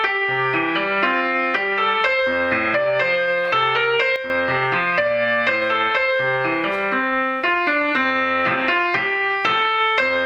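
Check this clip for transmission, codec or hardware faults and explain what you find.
One fault is present: a sudden gain jump. At 4.16 s the level drops by about 8 dB and stays there until 4.3 s. The sound and background noise fall together in one step. This likely comes from a digital gain change applied without a ramp.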